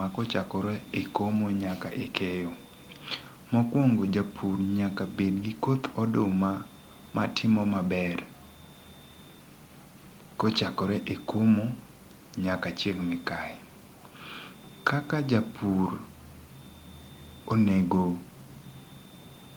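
No technical faults can be heard anywhere in the recording.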